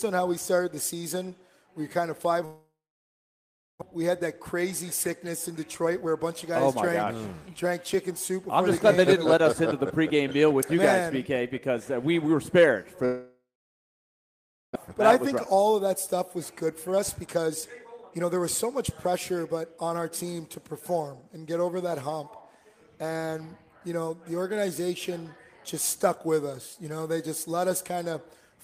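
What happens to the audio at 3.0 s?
The sound trails off into a brief fading buzz or hiss and then silence from 2.45 to 3.83 s, likely a long network dropout: about a second of audio never arrives and is skipped on resumption.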